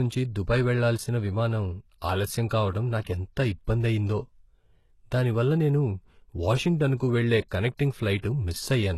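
HE-AAC compression runs throughout the speech, with plainly audible damage that fits a bitrate around 16 kbps. Only the lower spectrum is truly coded, and the treble is likely rebuilt by copying lower bands upward, so s sounds turn gritty, metallic and lispy.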